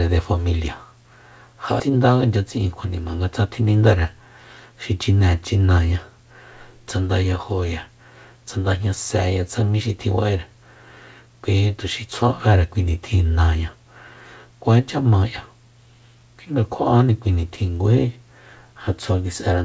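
At 1.80 s a skip ahead occurs: roughly 0.4 s of speech is dropped and playback jumps forward with no gap, splicing both sides almost directly. From 1.89 to 2.96 s a jitter buffer speed-up trims short pitch-period pieces, about a tenth of a second in total, so speech runs 108% fast at unchanged pitch and sounds hurried.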